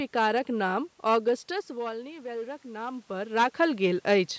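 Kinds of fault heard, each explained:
Hard clipping: throughout, the speech is driven about 9 dB beyond what one stage can pass, so a small share of peaks are flattened into crackle.
Automatic gain rising: 1.48 to 3.41 s, input falls about 14 dB as the talker moves back, and gain slowly climbs about 4 dB, swelling voice and background together.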